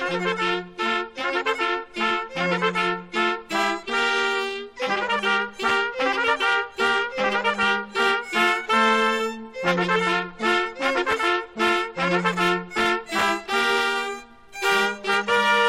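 Nothing stood out on listening; no technical problem can be heard anywhere in the audio.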